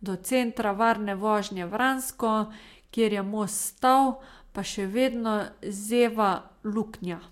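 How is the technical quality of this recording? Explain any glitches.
Nothing stood out on listening to this speech recording, so there are no glitches to explain.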